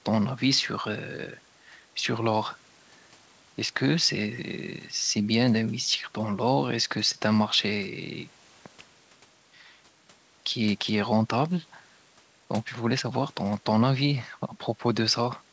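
No faults are audible in this speech; the band stops at 8 kHz, which fits a wideband call codec like G.722 and its normal microphone processing.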